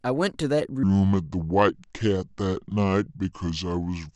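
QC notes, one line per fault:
0.83–4.16 s, section at the wrong speed: from 0.83 s to the end the speech plays at about 0.7 times its recorded speed, so it turns slow and deep, dropping roughly seven semitones at once, likely from this portion being played against the wrong clock.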